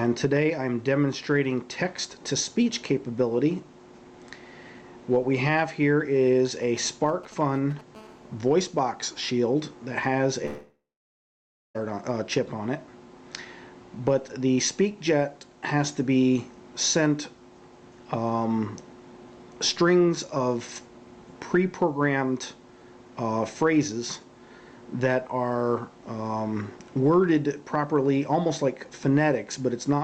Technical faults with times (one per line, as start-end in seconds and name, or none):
6.63-7.81 GSM signalling bursts
7.95-9.20 GSM phone buzz
10.45-11.77 long network dropout